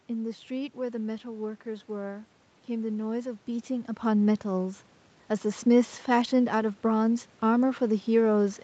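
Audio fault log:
No faults are present in this speech recording. The call's microphone processing leaves nothing above 8 kHz, room noise sits underneath, and the level shifts at around three and a half seconds as the talker moves relative to the microphone.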